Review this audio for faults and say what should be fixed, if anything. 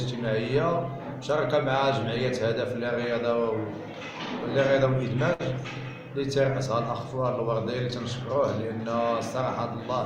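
A short stall from a late packet occurs at 5.33 to 5.41 s: a packet arrived late, the jitter buffer ran dry, and the receiver held the preceding sound for 60 ms before resuming where it left off. Nothing is lost, but playback now runs 60 ms behind, heard as a brief smeared hold. A slightly deeper or adaptive jitter buffer would absorb late arrivals of this size without stalling.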